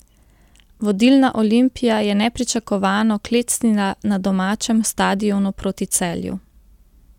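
No dropouts, distortion or other technical faults can be heard anywhere in this recording of speech.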